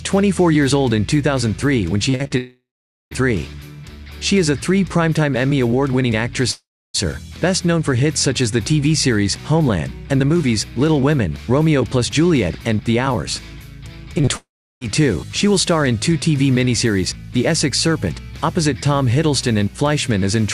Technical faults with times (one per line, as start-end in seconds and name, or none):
2.09-2.32 repeated packet loss (robotic sound)
2.37-3.13 long network dropout
6.51-6.96 long network dropout
14.18-14.29 short concealed packet loss
14.37-14.83 long network dropout